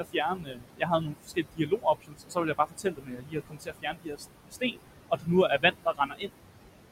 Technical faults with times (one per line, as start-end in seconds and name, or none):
0.00-6.92 noise suppressor artifacts
0.00-4.79 speech cut by the noise suppressor
5.09-6.31 speech cut by the noise suppressor